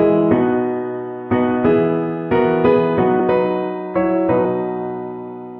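At 3.19 s the audio jumps forward by roughly 20 ms, and at 4.44 s by roughly 70 ms, which points to about one and then about three compressed frames being skipped. Damaged or missing frames were dropped instead of decoded. The skip forward in time distinguishes it from silence being inserted.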